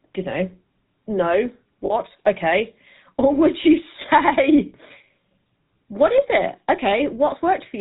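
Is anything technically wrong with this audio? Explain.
Yes. The speech runs through the GSM full-rate codec for its whole length, and there are two short lost GSM frames.

GSM full-rate codec: Throughout, the voice has a plainly audible buzzy, gravelly grain, and nothing comes through above 4 kHz. This codec models the vocal tract as a filter and drives it with a thinned, regularly spaced pulse excitation, which fits the 13 kbps full-rate scheme. The result is a rasp woven into the voice itself. That sets it apart from the swirly, watery smearing of a low-bitrate music codec.

Lost GSM frames: At 1.86 to 1.93 s, just after "don't know no", the sound briefly freezes into a rough, metallic ring for about 40 ms, which points to two missing frames. A shorter ring of about 20 ms follows at 4.06 to 4.09 s, consistent with one frame. The decoder fills each gap by repeating the last good frame's settings. 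That gives the held, ringing tone, not the silent hole or sharp click of a plain dropout.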